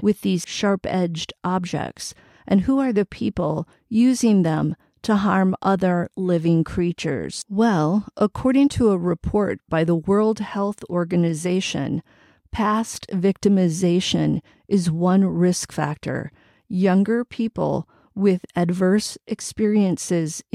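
No technical faults can be heard anywhere in this speech recording.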